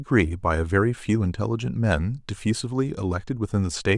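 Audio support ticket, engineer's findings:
No audible fault found in the speech recording. Nothing to escalate from the audio side.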